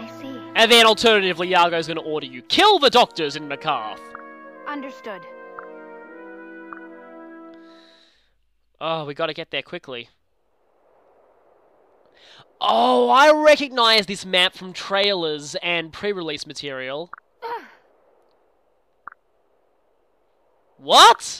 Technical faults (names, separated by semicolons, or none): loud pop